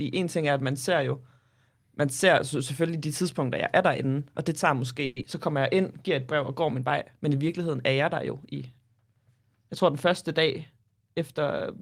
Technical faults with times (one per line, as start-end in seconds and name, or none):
5.05-5.26 long network dropout
10.41-11.48 jitter buffer speed-up